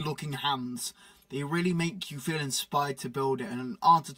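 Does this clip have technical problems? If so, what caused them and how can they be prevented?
Yes. Channel delay (comb filtering) runs through the whole clip: one channel arrives around 5 ms behind the other, and when the two are summed to mono, shared content cancels at the lowest notch near 100 Hz and again every 200 Hz or so above it, leaving the sound hollow and phasey. A spectrogram shows fixed, evenly spaced horizontal dark bands. To prevent it, time-align the channels before any mono fold-down.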